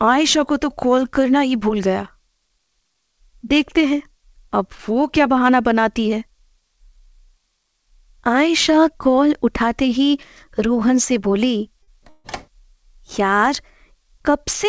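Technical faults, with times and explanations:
11.83–11.89 s, short stall from a late packet: one sound is held about 45 ms too long, with a faint buzzy smear where it should have moved on. A packet failed to arrive on time, the jitter buffer emptied, and the receiver stretched the last audio it had until the packet turned up. Playback then resumed from exactly where it paused, so nothing is lost, but everything after it lands 45 ms later.
12.09–12.26 s, call audio freeze: the sound stops progressing for about 149 ms and is replaced by a continuation of the last moment as a buzzy, hissy tail that thins out without ever dropping to silence. The likely cause is packets being held up in transit, which leaves the jitter buffer empty while the receiver fills the wait. When delivery resumes, the audio carries on from the same point, adding a further 149 ms of delay with nothing missing. The band-limit at 8 kHz is consistent with a G.722 call codec, which is normal for this path.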